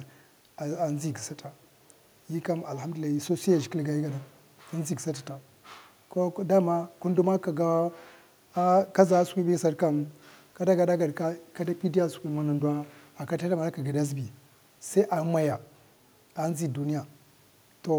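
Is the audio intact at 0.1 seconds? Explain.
Yes, at 0.1 seconds the audio is intact, with no audible dropout, click, distortion or other fault at that moment.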